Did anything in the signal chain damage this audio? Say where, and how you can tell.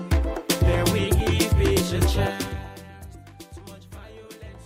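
Yes, codec stage: compressed frames skipped at 1.20 s and 3.57 s. Each drops about three 32 ms frames, so the audio jumps ahead by roughly 100 ms.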